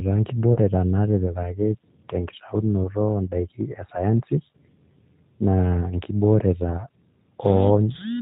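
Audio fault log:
throughout G.729 codec: The speech is carried at 8 kbit/s by a codec that rebuilds each 10 ms frame from a vocal tract filter, a pitch predictor and a handful of pulses, so it stays intelligible but sounds rough and faintly synthetic, with the damage plainly audible. Nothing above 4 kHz survives. A simple low-pass filter would only dull the sound, whereas here the buzzy, slightly mechanical texture of the voice itself gives away the model-based coding.
0.53–0.58 s VoIP packet loss concealed by the speech codec: About 30 ms of audio went missing, which fits a single lost packet. Instead of a gap, the decoder extended its last pitch and filter settings and faded their gain, so the sound is briefly stretched and fades. Because each frame depends on the previous one, the voice stays weak or distorted just after 0.58 s. A plain dropout would give a hard silence or click rather than this stretched blur.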